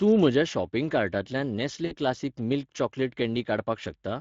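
Across the whole clip the speech has a grainy, hoarse edge. This is Speex codec damage, plainly audible and consistent with a mid-rate setting near 20 kbps, where the CELP coder has too few bits to model the excitation cleanly.

From 1.85 s to 1.96 s the sound stretches into a brief buzzy or noisy, fading sound and then comes back weak and distorted. This is VoIP packet loss concealed by the speech codec. About 60 ms of audio went missing, which fits three lost 20 ms frames, so the decoder filled the gap by repeating its last pitch and filter at falling gain. Because each frame builds on the one before, the speech stays thin for a moment after the packets resume.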